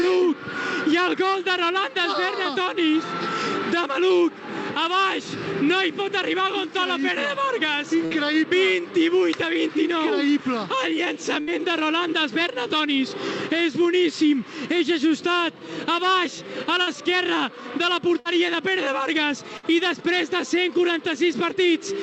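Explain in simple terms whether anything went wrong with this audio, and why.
Five brief stutters, at 8.05, 11.41, 16.81, 18.20 and 19.57 seconds, each a short held buzz or fading hiss before the sound jumps ahead. This is a burst of packet loss: about 60 ms of audio never arrived, so the player stretched the last sound to cover it.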